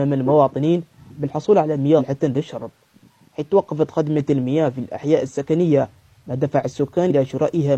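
At 1.95 to 2.01 s and again at 7.06 to 7.12 s, compressed frames are skipped: whole compressed frames never play, so the audio jumps ahead, roughly 200 ms then about 100 ms.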